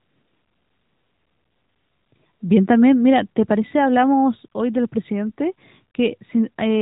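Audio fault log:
The speech signal holds steady with nothing breaking it up, and its narrowband mobile-style coding stays at a light level that suits a higher rate such as 12.2 kbps.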